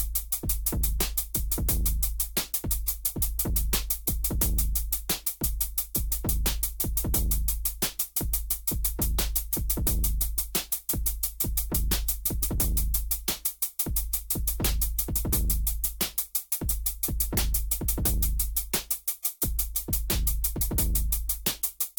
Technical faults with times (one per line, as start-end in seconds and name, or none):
none